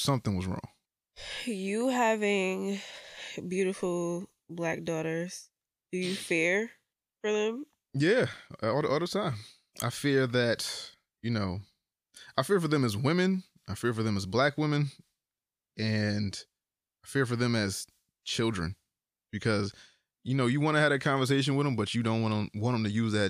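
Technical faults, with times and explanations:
8.32 to 8.39 s, loose connector crackle: a quick, ragged burst of scratching right before "all the all the", lasting about 70 ms. That's a worn or dirty contact flickering open and shut, chopping the signal into fragments.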